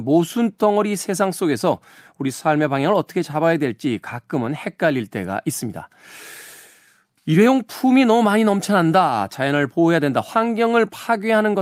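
No technical faults can be heard anywhere in the speech recording.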